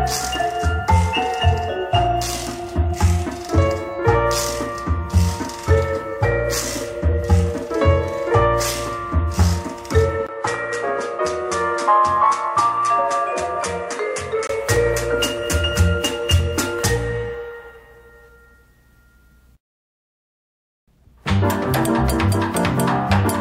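At 10.27 s a brief gap of about 20 ms opens, and the sound then turns duller and a few decibels quieter, with nothing above 11.4 kHz and a faint new noise floor sitting far below the signal. At 14.49 s the fuller, brighter tone returns. This is likely an input switched to a poorer device: the recording path moved to a narrower-band microphone with its own level and noise for those four seconds, then switched back.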